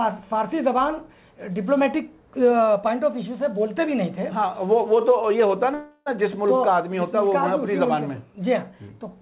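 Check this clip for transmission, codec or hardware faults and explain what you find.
There is one fault, a call audio freeze from 5.74 to 6.08 s. Packets were most likely held up in transit, draining the jitter buffer, so the receiver stretched the last sound into a fading buzz or hiss for about 0.32 s, ending in a 30 ms silence. The audio then resumes where it stopped, nothing lost but running 321 ms later, all within the G.711 mu-law path's band, which stops at 4 kHz.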